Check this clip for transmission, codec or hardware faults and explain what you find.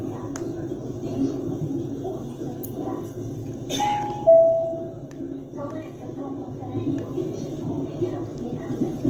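One codec fault runs through the whole clip: Opus compression is the likely cause of its damage, which is plainly audible from start to finish. In its music (CELT) mode, the encoder preserves each band's overall energy but, short of bits, rebuilds band detail by copying lower bands or injecting noise, consistent with a low bitrate near 16 kbps. Tonal parts of the sound come out grainy, rough and hissy rather than swirly. Bandwidth stays full, reaching 20.2 kHz. A spectrogram shows continuous coverage with smeared, noise-textured bands and no sharp holes; the waveform looks normal.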